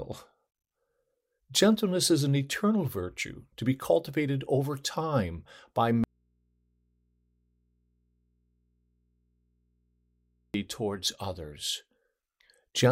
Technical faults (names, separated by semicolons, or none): audio dropout to a faint residue